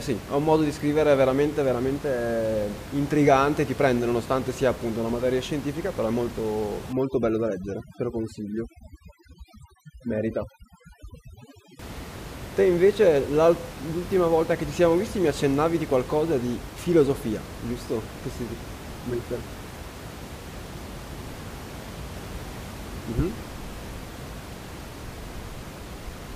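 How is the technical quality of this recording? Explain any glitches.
One stretch of this speech recording has a processing fault: overdone noise removal from 6.93 s to 11.79 s. Over those five seconds a noise reduction stage is clamping too hard, driving individual frequency bands down or out whenever their level sits close to what it has judged to be noise. Room noise lying about 14 dB below the speech feeds that estimate, so the background drops and breaks up into twinkling specks, while the quieter parts of the voice are stripped away too.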